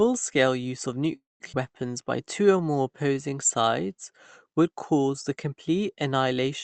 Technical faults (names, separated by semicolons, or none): call audio freeze; skip ahead; jitter buffer slow-down